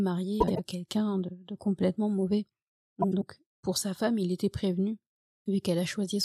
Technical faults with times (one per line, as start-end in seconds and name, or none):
0.40-0.59 frames out of order
3.02-3.23 frames out of order